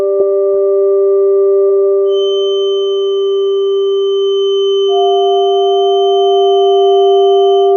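A music clip with a feedback whistle coming in at about 2.04 s and sitting there right to the end at 7.77 s. It's a thin, steady tone at 3.1 kHz, roughly 15 dB under the music, wavering a touch in level. That's likely a speaker-to-mic loop parked right on the edge of feedback, so the one frequency keeps ringing without ever running away.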